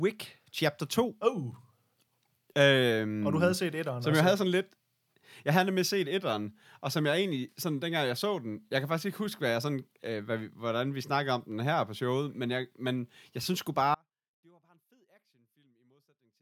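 Speech clip with an audio dropout to a faint residue from 13.9 s to the end, right after "men jeg synes sgu". Unlike a fade, it cuts abruptly, leaving only faint sound roughly 35 dB down, likely a live path losing its source.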